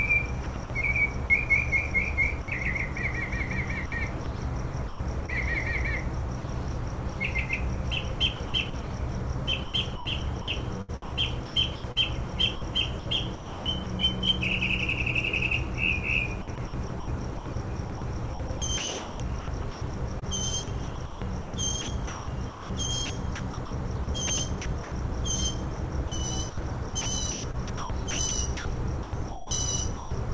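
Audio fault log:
0.44–1.30 s, 3.86–5.30 s, 6.40–7.16 s, 8.36–8.84 s, 9.64–13.86 s, 16.42–24.92 s, 25.76–30.11 s: sound chopped by the voice detector. Quieter parts keep switching to flat comfort noise, up to about 2.4 s in total within one range, most likely because the sender's detector repeatedly stopped and resumed sending.
2.42 s: sound dropped by the voice detector. A 60 ms piece of sound gives way to steady synthetic noise, likely because the sender's detector took it for background, then the real sound returns once transmission triggers again.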